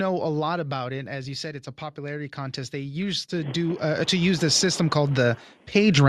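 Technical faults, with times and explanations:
0.05–1.6 s, automatic gain falling: the level control judged the incoming speech too loud and pulled its gain down gradually, by about 8 dB. The opening is loud, then voice and background noise sink together, because the whole signal is scaled rather than just the speech.
1.95–6.08 s, automatic gain rising: the gain control now judged the input too quiet and raised its gain step by step over several seconds. Speech and background swell together as one, a slow climb in level.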